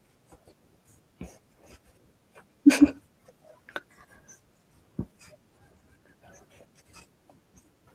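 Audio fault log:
No faults can be heard anywhere in the speech recording. There is nothing in it to log.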